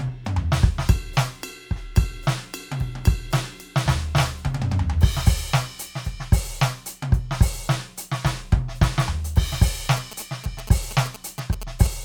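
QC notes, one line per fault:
9.97–11.87 s, GSM signalling bursts: near the end of the music a galloping dit-dit-dit of short buzzes breaks through, sitting roughly 15 dB under the music. That's a 2G phone close by doing its signalling chatter, sending short clusters of radio bursts rather than a steady transmission. Something in the audio chain rectifies the RF, so each burst group turns into a brief buzz pulsing at about 217 Hz, which gives it that stop-start rhythm.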